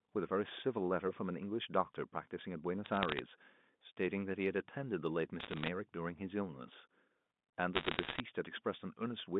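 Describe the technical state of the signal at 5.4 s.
Bits flipped on the G.711 digital phone line from 5.4 to 5.68 s, each corrupting a single sample, so sharp ticks crackle over the unchanged speech.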